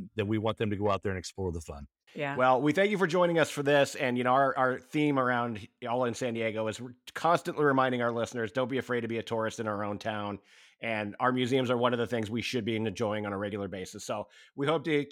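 No technical faults are audible.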